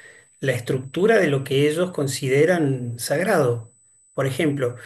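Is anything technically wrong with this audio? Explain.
Yes. USB whine runs throughout the speech as a steady, fixed-pitch tone at 8 kHz, strongest at its 16 kHz harmonic, roughly 30 dB below the speech. The bus's 125-microsecond microframes draw current that leaks in through power or ground. Unlike mains hum, it sits high, far above 50 or 60 Hz.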